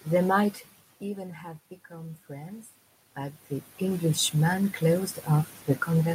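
From 1.01 to 4.16 s, automatic gain rising: the input fell about 15 dB, so the gain crept up about 5 dB. Speech and the room noise floor swell together, showing as a slow upward ramp in the waveform envelope.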